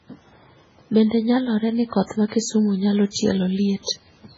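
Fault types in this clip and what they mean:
MP3 compression: The speech is heavily damaged throughout, with nothing above about 7.7 kHz, so the top of the sound is cut off flat. What remains sounds watery and swirly, because weak frequency detail drops in and out from one short block to the next. Sibilants turn metallic and chirpy. This is likely MP3 coding that starved the encoder of bits, and the damage fits a very low bitrate near 16 kbps.
pre-echo: Three sharp onsets arrive with a short hiss just ahead of them: at 2.28 to 2.32 s, 3.11 to 3.16 s and 3.84 to 3.88 s. The hiss runs for about 37, 50 and 42 ms. Each onset fell late in a coding block, so the noise meant for the loud part was spread across the quiet moment before it. Those attacks therefore sound soft and smeared rather than crisp.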